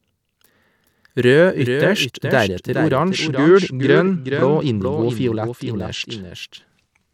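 A doubled audio track runs through the whole clip. A second full-band copy of the speech trails the original by roughly 0.4 s. It sits about 5 dB lower and has no decay or room colour. The likely cause is a slower second capture path mixed back in.

From 2.95 s to 6.34 s there is a Bluetooth SBC bit pool drop. The link congested, and the encoder gave the audio fewer bits. The treble dulls and gritty noise rises. This fits a bit pool cut from 31 to 12, near 88 kbps.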